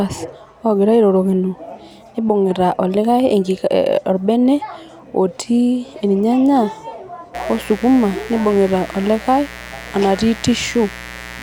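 From 7.34 s to the end, a mains buzz sits under the speech. Switching spikes on the 60 Hz supply leak in, giving a steady, raspy buzz, roughly 15 dB below the voice.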